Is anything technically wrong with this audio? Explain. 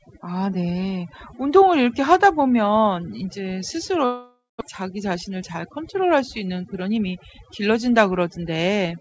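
Yes, there are three faults in this speech clip.

Overdone noise removal runs through the whole clip. A noise reducer set far too strong pulls individual frequency bands down or out wherever they sit close to its noise estimate, and it takes the quieter parts of the voice with them. The background drops and breaks up into twinkling specks. Ordinary band-limiting would dull the sound evenly without those flickering artefacts, which is what separates this from a simple bandwidth loss. The call path, which fits a G.722-type wideband codec, carries nothing above 8 kHz.

From 4.06 to 4.63 s the audio breaks off, most likely a long network dropout. For about 547 ms the receiver keeps extending the last sound as a fading buzz, and roughly the final 190 ms of that is silent. About 400 ms of the original never arrives, so speech resumes further on. A short packet loss would leave only a brief smear, not this long decay into silence.

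From 4.83 to 7.05 s a jitter buffer speed-up follows the gap. The buffer had built up roughly 150 ms of extra delay, and the receiver trimmed that away by cutting out tiny slices one or a few pitch periods long, over and over. The speech runs at about 106% speed with the pitch unchanged, so it sounds slightly hurried. A resampling error would raise the pitch along with the speed.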